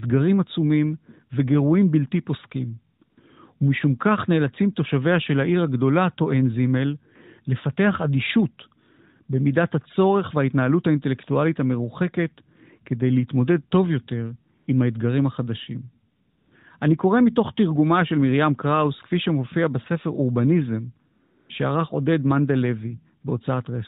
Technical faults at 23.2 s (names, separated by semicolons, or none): AMR comfort noise